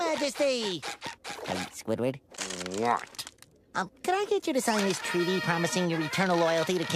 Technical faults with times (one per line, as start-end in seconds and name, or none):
none